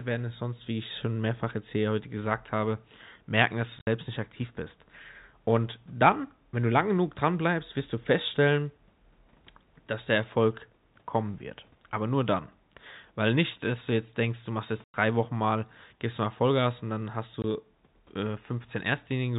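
At 3.79 to 3.87 s, 14.84 to 14.94 s and 17.42 to 17.44 s the speech drops out through packet loss filled with silence. The receiver inserted digital silence where audio never arrived. About 70 ms of sound is missing across the first 80 ms window, 100 ms at the second and 20 ms at the third, consistent with 10 ms packets. Each gap opens and closes with hard edges over the narrowband G.711 telephone sound.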